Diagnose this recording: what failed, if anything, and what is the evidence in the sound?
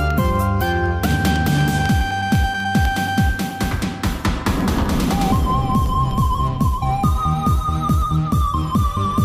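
Periodic USB or driver dropouts run from 0.11 to 6.11 s: ticks every 0.25 s, about four per second. At the USB or driver stage, something blocks the audio stream on a fixed schedule, and each time a tiny fraction of a millisecond of signal is replaced by silence.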